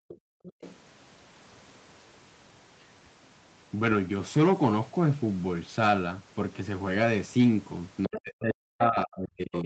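From the start to 0.54 s the room background sinks, at its deepest by about 40 dB, for roughly 0.4 s in all. This is background gated by the echo canceller, which turned the microphone down hard while the loudspeaker played.

At 0.09 to 0.15 s and 0.45 to 0.76 s a faint second voice, roughly 20 dB under the main speech, comes through in scraps. It returns slightly louder, around 15 dB down, at 8.04 to 8.2 s and 9.52 to 9.65 s. This is likely the other side's voice leaking through, loudspeaker sound the echo canceller failed to remove.

From 8.07 s to the end the main speech dips deeply, by up to about 40 dB. This fits speech suppressed in double talk, with both sides talking at once and the canceller turning both down.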